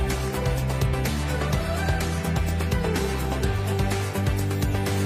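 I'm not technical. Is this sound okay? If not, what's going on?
Yes, it's fine; nothing here sounds wrong.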